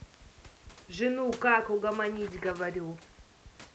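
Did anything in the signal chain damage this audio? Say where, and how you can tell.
No, nothing in the signal chain damaged this audio.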